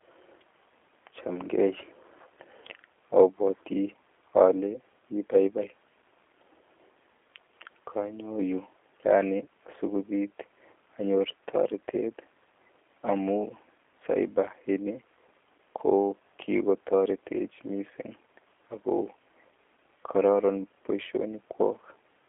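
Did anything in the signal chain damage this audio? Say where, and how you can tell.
Yes: the speech carries G.729 codec damage throughout, at the codec stage. Nothing sounds above about 3.7 kHz, within a 300 Hz to 3.5 kHz line band, and the roughness, synthetic quality that fits an 8 kbit/s CELP coder. Simple telephone filtering would narrow the band without that roughness.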